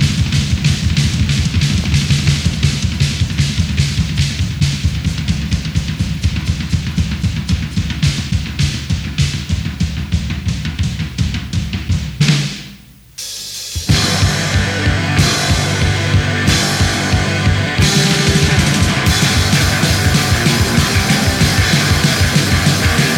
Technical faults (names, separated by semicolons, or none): none